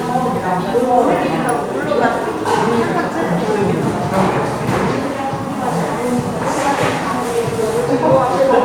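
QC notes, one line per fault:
No faults heard anywhere in this recording.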